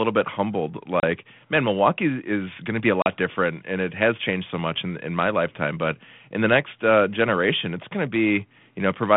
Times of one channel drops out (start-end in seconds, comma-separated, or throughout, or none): none